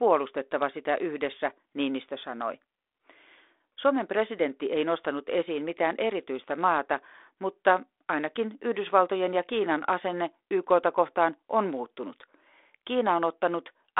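Speech with no technical faults anywhere in the recording. It has come through a G.726 ADPCM link at 32 kbit/s, so it sits in a telephone band of roughly 300 Hz to 3.6 kHz with nothing above 3.8 kHz, and the coding leaves only light grain on it.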